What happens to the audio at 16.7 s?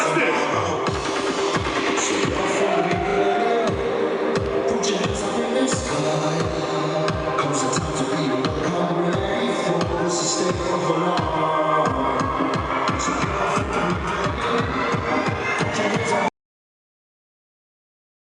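Audio dropout to silence from 16.28 s to the end: the input was likely lost, so the sound cuts to total silence without room tone.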